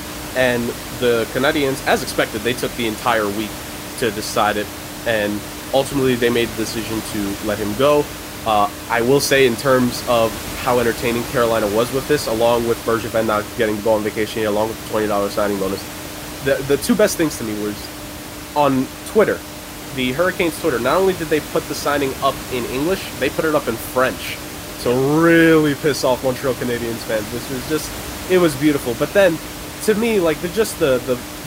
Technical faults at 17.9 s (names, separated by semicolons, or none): none